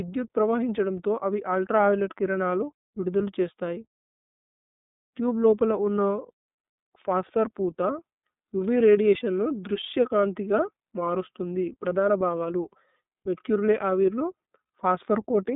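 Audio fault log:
throughout: iLBC codec; nothing above 3.8 kHz, and each 30 ms frame is coded on its own, giving plainly rough, synthetic speech that fits the 13.33 kbps mode.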